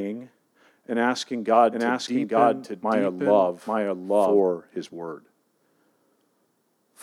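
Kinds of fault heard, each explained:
Doubled audio track: From 1.72 s to 4.40 s the speech is heard twice at once. A second, full-band copy trails the original by about one second, at roughly the same loudness. It carries no decay or added room sound, so it reads as a separate overlapping track rather than an echo. It cuts in and out abruptly at those times. This likely comes from the audio being captured again through a slower path.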